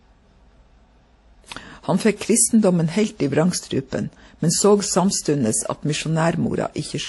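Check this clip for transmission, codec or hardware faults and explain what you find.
One codec fault runs through the whole clip. The speech stops dead at 11.5 kHz, and two different kinds of compression artefact are heard together. The likely cause is transcoding between lossy codecs, which fits an MP3 encode re-encoded as WMA 1, both near 48 kbit/s. The second codec wastes bits on the first codec's artefacts and adds its own. The lower 11.5 kHz cut-off stays.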